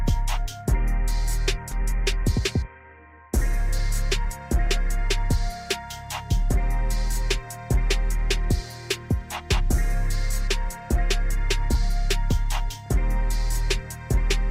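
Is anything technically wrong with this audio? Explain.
Yes, two faults sit close together near the start.

At 1.71 s there is a skip ahead. A stretch of roughly 400 ms of audio was dropped, either by the jitter buffer when it overflowed or on the way in transit, while later audio was already waiting, and playback went straight on to later material. Nothing fills the gap. The audio on either side is butted together, so the sound lurches forward abruptly and a short piece of it is simply gone.

From 1.82 s to 4.77 s comes a jitter buffer speed-up. The receiver was still holding more audio than its target, so it kept cutting out tiny slices a pitch period or so long to drain the excess, about 150 ms in total. Pitch stays the same, but the sound runs at about 106% of normal pace for those three seconds and comes across as slightly rushed.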